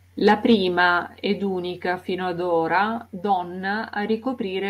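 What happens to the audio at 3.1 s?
At 3.06 s the whole signal steps down in level by about 2 dB. The drop is instant. Speech and background fall together and stay at the lower level afterwards. This is a microphone volume stepped down. The likely cause is the call software judging the input too hot and cutting the microphone's input volume in a single move. Because it is one discrete step, there is no gradual fade. The level simply settles lower.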